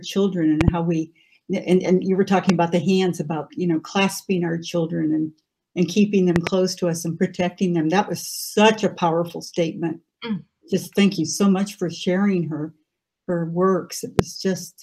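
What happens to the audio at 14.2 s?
A single loud pop hits from 14.19 to 14.21 s, roughly 20 dB above the surrounding audio. It is likely a voltage spike from a plug, switch or static. Unlike a dropout click, the sound carries on underneath without any gap.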